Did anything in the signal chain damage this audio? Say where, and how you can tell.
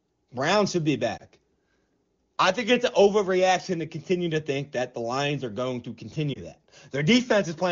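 Yes. Lost AMR speech frames on the radio link: brief dips at 1.17 to 1.22 s and 6.33 to 6.39 s. Each fits one corrupted 20 ms frame that the AMR-WB decoder concealed by repeating the previous pitch and vocal-tract settings at reduced gain.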